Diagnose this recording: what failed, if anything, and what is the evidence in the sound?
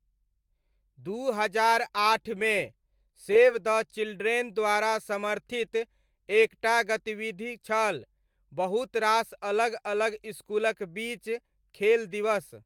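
Nothing stood out on listening to this speech recording that would point to a failure at any stage of the chain.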